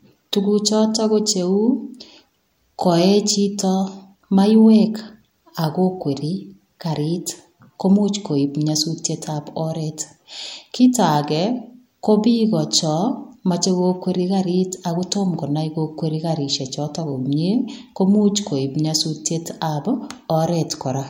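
From 10.4 to 13.58 s, the resampler restarted on every block. Each 20 ms block, in what sounds like a 48 kHz to 44.1 kHz conversion, was converted without its neighbours, leaving a small error at every edge and a 50 Hz buzz that sounds only under the speech.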